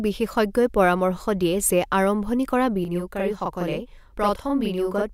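From 2.85 s to the end of the clip, the speech takes on a channel delay (doubling) fault. One channel runs 40 ms behind the other, and when the two are summed to mono the late copy is heard as a separate, equal-level repeat rather than blending in. The result is a doubled voice with a short slap trailing each syllable onset, a gap that fits a long buffer inserted in one path.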